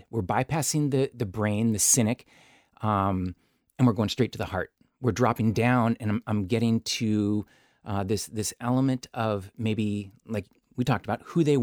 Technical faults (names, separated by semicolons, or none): none